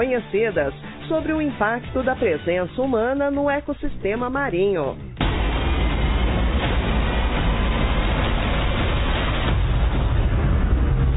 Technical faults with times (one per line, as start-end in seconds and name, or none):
none